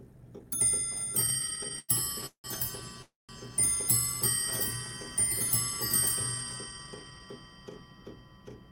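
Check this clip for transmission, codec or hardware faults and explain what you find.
There are three network-delay faults here.

Repeated stalls (stutter), 1.21 to 2.46 s: the audio catches 18 times, with the longest hang at 177 ms. Packets kept showing up late, so the jitter buffer kept running dry and the receiver stretched the last sound to cover about 423 ms, roughly a third of that stretch. Nothing's lost, but it drags and stutters.

Call audio freeze, 3.02 to 3.31 s: the sound hangs as a fading continuation of itself, then drops to silence for about 170 ms before picking up where it left off. That's likely packets held up in transit emptying the buffer. The 267 ms gap pushes everything after it later without cutting anything.

Jitter buffer speed-up, 6.64 to 7.20 s: the audio runs at about 114% speed with pitch unchanged, so it sounds hurried. The receiver was holding more audio than it wanted, so it trimmed tiny pitch-period slices in quick succession, about a tenth of a second in all, to claw back the delay.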